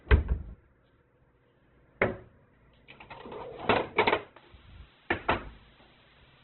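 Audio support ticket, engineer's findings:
Throughout, likely Opus compression at a very low rate in CELT mode: band energies kept, detail filled by folding and noise. Sound is muffled, nothing above 4.2 kHz, and textures are rough and grainy. Consistent with about 8 kbps.

From 4.38 s to the end (6.44 s), low bit depth with dither: the signal is requantised coarsely with dither added before rounding. The result is a steady, even hiss, roughly 25 dB under the signal, with no distortion. Consistent with an 8-bit stage.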